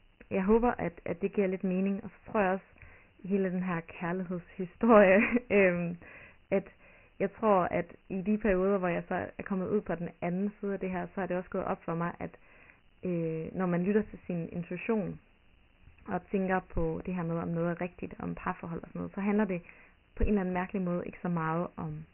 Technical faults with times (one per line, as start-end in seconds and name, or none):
0.00-22.13 Dialogic VOX ADPCM